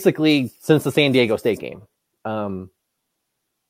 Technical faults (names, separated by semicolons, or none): none